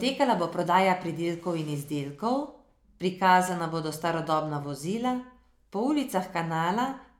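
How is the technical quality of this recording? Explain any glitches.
Nothing in the recording stands out as a glitch, so there's nothing to explain here.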